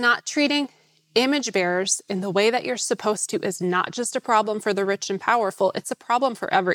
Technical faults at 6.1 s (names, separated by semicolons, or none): none